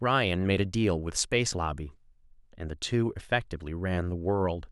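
Nothing technical stands out in this short bit of speech, so there's no fault to point to anywhere in it.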